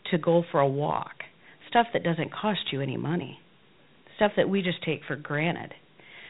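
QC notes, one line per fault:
Throughout: Dialogic VOX ADPCM. The speech is stored as coarse 4-bit adaptive step differences, which fits a 32 kbps stream. Nothing survives above 3.8 kHz, and the quantisation error rides on the signal as a plainly audible gritty hiss that follows the speech.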